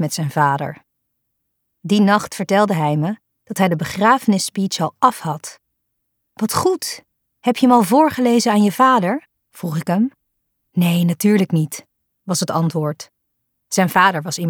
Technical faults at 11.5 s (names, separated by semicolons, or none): none